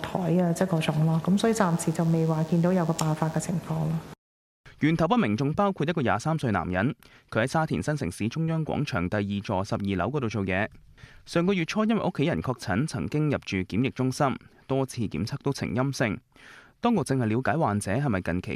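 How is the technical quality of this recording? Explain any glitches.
The recording has one glitch, a DECT cordless phone buzz from 1.41 to 3.41 s. A DECT handset or base station nearby sends a short radio burst every 10 ms, and the audio circuitry rectifies that energy into a 100 Hz pulse train rich in harmonics. It sounds like a thin, raspy buzz around 30 dB below the main sound. Unlike mains hum, which is a smoother, rounder tone at 50 or 60 Hz, this buzz is edgy and lasts only about 2 s.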